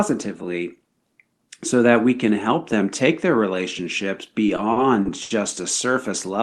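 Repeated stalls (stutter) run from 4.46 to 5.31 s in this speech clip, heard through a call codec whose top end stops near 12 kHz, which fits Opus. Packets arrived late or too slowly, so the jitter buffer emptied five times. Each time, the receiver stretched the last sound to cover the wait, about 180 ms in all and at most 80 ms at once, roughly a fifth of that span. Nothing is lost, but the speech drags and stutters.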